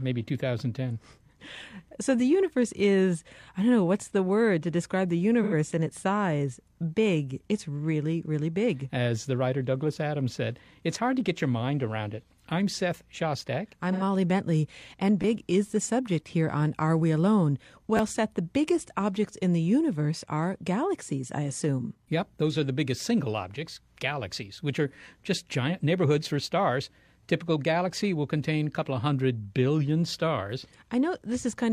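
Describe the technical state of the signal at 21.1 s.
At 21.1 s the speech signal is intact, with no audible technical fault at that moment.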